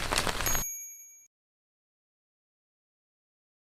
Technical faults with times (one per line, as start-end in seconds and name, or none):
0.93-1.00 burst of packet loss